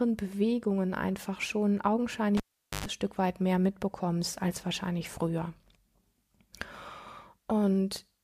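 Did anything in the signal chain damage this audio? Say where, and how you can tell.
Yes, in the analogue wiring: a cable pulled and plugged in, 2.37 to 2.86 s. A pop opens 0.44 s of near silence. Then 0.11 s of 50 Hz mains buzz as only the tip touches, and another pop. The waveform shows two spikes around a flat stretch. The spectrogram shows two broadband vertical lines framing a blank gap with stacked 50 Hz harmonics.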